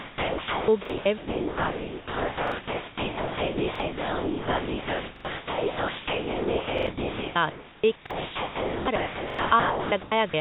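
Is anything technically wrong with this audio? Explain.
Yes, two faults are audible.

Sound chopped by the voice detector, 0.0 to 10.3 s: the sound keeps cutting out, with about 9.3 s in total replaced by comfort noise. The likely cause is the sender's voice detector repeatedly deciding the speech was silence and gating it.

Repeated buffer, at 0.85, 2.48, 3.76, 5.16, 6.78, 8.06 and 9.30 s: new audio arrived late, so playback reran the previous chunk of about 43 ms, which fits a 2048-sample buffer. Each is a short, hard-edged stutter. At 5.16, 6.78 and 9.30 s the chunk plays twice more, losing about 100 ms rather than about 40 ms.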